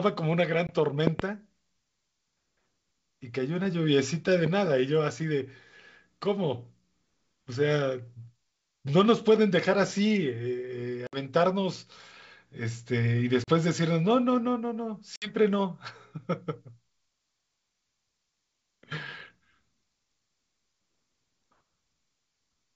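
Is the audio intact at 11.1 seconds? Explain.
No. Packet loss on an ADPCM call breaks the audio from 11.07 to 11.18 s. About 60 ms of signal, roughly seven packets, drops out and is filled with silence, leaving a hard-edged hole. The wideband sound points to G.722 coding, which is ADPCM-based. So the decoder's predictor and step size lose track of the sender's during the gap. When the sound resumes, it comes back slightly distorted. It settles within some tens of milliseconds.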